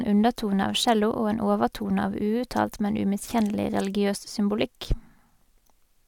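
No technical faults can be heard in this speech recording. There is no moment in the audio that calls for a time or a value to be pointed out.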